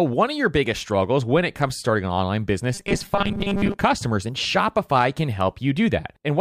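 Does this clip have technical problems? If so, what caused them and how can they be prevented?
Yes. Between 2.74 and 3.81 s, new audio likely arrived too seldom. The software filled each gap by repeating the last few milliseconds while the real signal was skipped, and around 70 percent of that stretch is made of repeats. The result is robotic sound from repeated short buffers. Each repeat lasts about 5 ms, so together they impose a rigid, metallic buzz at a fixed 200 Hz that follows the speech only roughly. To prevent it, keep data delivery steady and use a larger input or jitter buffer so the stream never runs dry.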